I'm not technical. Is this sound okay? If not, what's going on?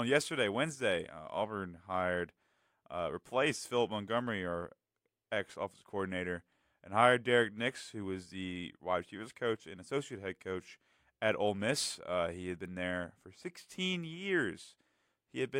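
Yes, nothing technical goes wrong with this recording at any point, so the sound itself is in good order.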